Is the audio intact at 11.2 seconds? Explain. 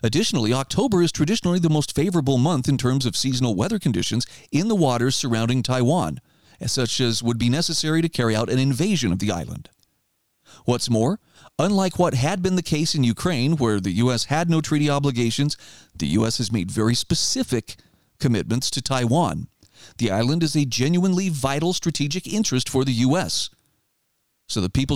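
Yes, at 11.2 seconds the speech is intact, with no dropout, click, distortion or other fault to be heard at that moment.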